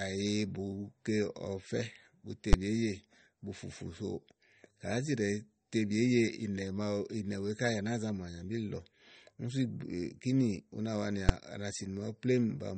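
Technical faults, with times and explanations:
Throughout, MP3 compression. Nothing is heard above 8.4 kHz, and the damage is plainly audible. The speech has a watery, swirling quality, and s sounds turn thin and metallic. This is likely a perceptual encoder starved of bits. It sliced off the treble at a fixed point and kept dropping weak frequency detail, which flickers in and out between frames. The degree of loss points to a low bitrate, around 38 kbps.
2.53 s and 11.29 s, invalid numbers at full scale. Each is a single sharp bang. A processing step produced infinite or undefined values, and these were clamped to the largest sample the format allows. The output sat pinned at one extreme value, far beyond the speech peaks, for about 10 ms at 2.53 s and about 5 ms at 11.29 s. Both blocks are too short to hear separate pops at their edges, so each lands as one hard crack.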